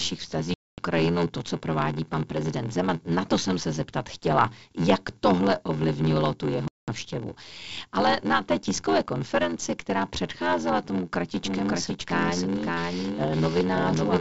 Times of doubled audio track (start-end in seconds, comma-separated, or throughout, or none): 11.36-14.21